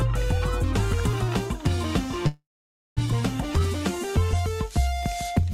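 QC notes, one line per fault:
2.27–2.99 s, call audio freeze: the sound stalls into a fading buzz that drops to silence for about 0.54 s, then resumes exactly where it stopped. This is likely a jitter-buffer underrun from delayed packets. Nothing is lost, but everything after arrives about 0.69 s later.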